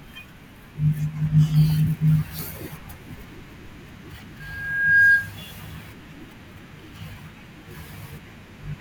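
At 4.40 s a microphone begins picking up the loudspeaker it feeds, and at 1.6 kHz the gain around that loop rises above one, producing loudspeaker feedback squeal. The tone feeds on itself, swelling over roughly half a second into a piercing whistle about 10 dB louder than the speech beneath it. It stays a single steady pitch until it stops at 5.32 s, when the loop is broken.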